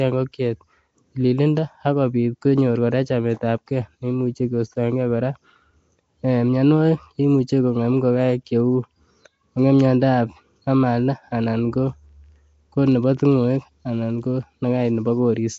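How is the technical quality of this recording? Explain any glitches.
The quality is poor: throughout the whole clip the speech carries plainly audible codec damage, most likely from Nellymoser compression, the old Flash microphone codec. It likely codes short blocks with a fixed, tiny bit budget, which fits a rate of around 32 kbps, so weak bands get no bits and are filled with noise. The speech sounds rough and smeared, with a hissy, underwater halo. On a spectrogram, energy stops sharply at about 7.7 kHz, and below that the fine harmonic lines break into blotchy, noise-filled patches.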